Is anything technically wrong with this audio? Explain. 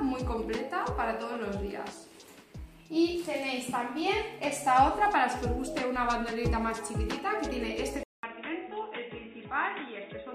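Yes. At 8.03 s, after a 200 ms gap, the sound turns dull, boxy and much quieter, with nothing above 3.8 kHz and new background noise: likely an input switched to a poorer device.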